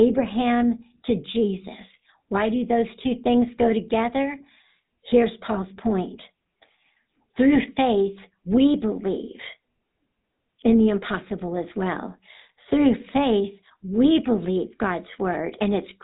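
GSM full-rate codec damage runs throughout. A pulse-driven vocal-tract model consistent with 13 kbps leaves the speech plainly buzzy and gravelly, with nothing above 3.8 kHz.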